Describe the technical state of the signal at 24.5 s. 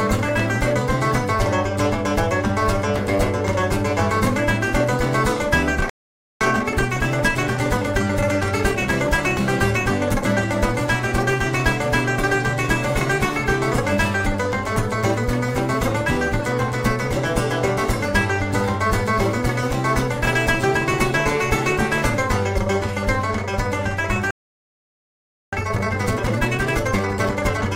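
At 24.5 s the output is in a playback stall: the sound cuts off abruptly at 24.31 s and stays silent for about 1.22 s, until 25.53 s. The likely cause is the player running short of buffered data or its output thread being blocked.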